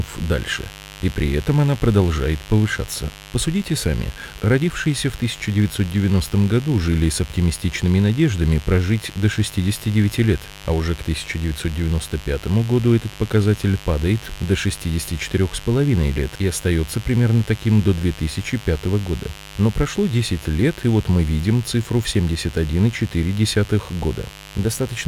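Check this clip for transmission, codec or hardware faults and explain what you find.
Mains buzz runs under the speech for the whole clip. Spikes from 50 Hz mains leak in twice per cycle, stacking harmonics into the kilohertz range. It sounds raspy and steady, about 20 dB below the speech.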